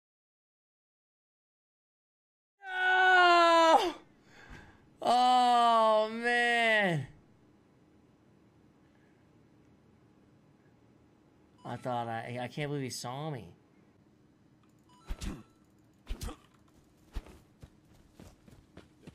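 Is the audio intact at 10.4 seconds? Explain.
Yes, the audio is intact at 10.4 seconds, with no fault at that moment.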